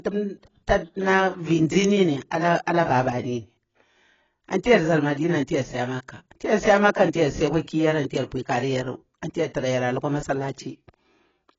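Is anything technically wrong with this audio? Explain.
Yes. Throughout the clip, the speech is dull and warbly, with nothing above 7.6 kHz. The likely cause is heavy AAC compression at a low bitrate, near 18 kbps, stripping detail.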